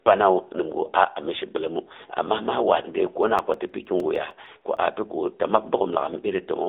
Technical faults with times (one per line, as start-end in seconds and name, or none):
0.00-6.68 AMR narrowband mobile codec
3.08-4.92 CD scratch ticks